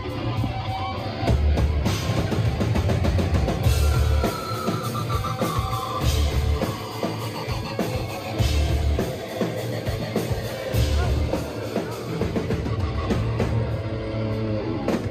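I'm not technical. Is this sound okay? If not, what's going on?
Yes, it's fine: nothing in it points to a technical fault, so there's nothing to fix.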